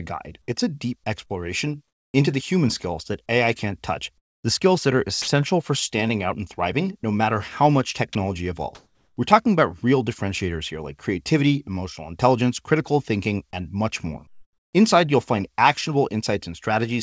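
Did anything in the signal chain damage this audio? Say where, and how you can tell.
Yes. At the call-processing stage, discontinuous transmission likely swapped the real background for synthetic comfort noise at 1.88–2.14 s, 4.18–4.44 s, 8.75–9.17 s and 14.27–14.73 s. The detailed background, sitting about 54 dB below the loudest sound, turns flat and featureless, with level jumps of about −5, −16, +6 and −4 dB.

The sender's voice detector likely mistook real sound for background and stopped sending, so it was dropped by the voice detector: 60 ms vanishes into steady noise at 5.22–5.28 s, and a brief slice disappears at 8.13 s before the sound resumes.

On the network side there was short concealed packet loss. About 20 ms of audio arrived too late at 7.02–7.05 s. The decoder extended the preceding sound to cover the gap and then blended back, leaving a quick smear or wobble.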